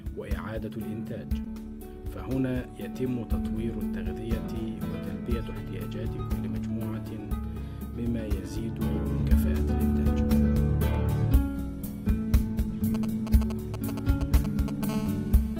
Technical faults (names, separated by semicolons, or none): GSM signalling bursts; GSM phone buzz